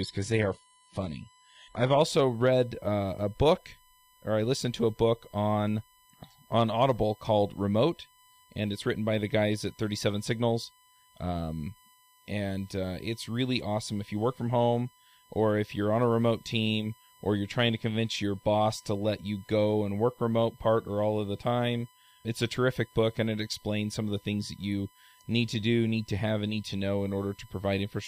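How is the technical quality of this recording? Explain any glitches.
The recording has two technical faults: a constant tone from USB interference, and a low-quality opening from an adaptive stream.

USB whine runs through the whole speech clip. Current drawn by the USB bus in 1 ms frames leaks into the audio through the power or ground wiring, so its 1 ms rhythm becomes an audible tone. Here it sits at a steady 1 kHz, roughly 35 dB below the speech. It is a thin, fixed-pitch whine.

From 0 to 2.0 s there is an adaptive stream starting at a low bitrate. To begin playing quickly, the player opened on a low-bitrate version of the stream, then switched to a better one once it had measured the connection. During those first two seconds the sound is dull and smeared, with nothing above 11.7 kHz and synthetic-sounding treble. The character points to HE-AAC at around 16 kbit/s. At 2.0 s the quality jumps abruptly, with no gap, to fuller, cleaner audio consistent with AAC-LC at about 96 kbit/s.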